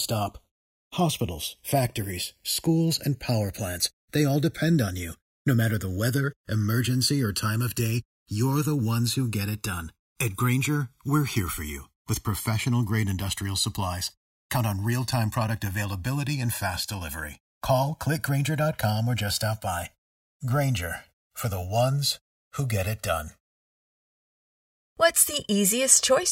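A slow flanging runs through the whole speech clip, with a hollow, swirling colouration that gradually shifts as it goes. This is the channels drifting apart: the left and right signals were captured on devices with separate clocks, off by something like 50 parts per million, so the delay between them creeps upward to roughly a millisecond and a half by the end. Summed to mono, the resulting comb-filter notches sweep steadily through the spectrum.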